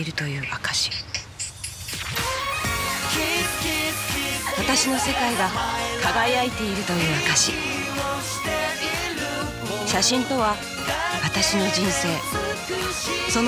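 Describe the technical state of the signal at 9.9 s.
Nothing at 9.9 s points to a technical fault; the signal is intact at that moment.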